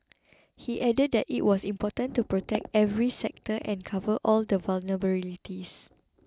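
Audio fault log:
No faults are audible anywhere in this speech recording.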